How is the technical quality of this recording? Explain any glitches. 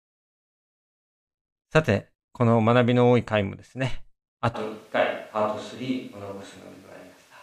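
The recording has one clear fault. At 4.56 s the sound changes abruptly and stays that way to the end: the speech turns roomy and hollow, loses its low end, and background noise rises to around 30 dB below the speech, with no real drop in level. This is the signature of a switch to a distant microphone, likely because the close microphone's feed dropped out and a farther pickup took over, capturing more room reflection and less direct bass.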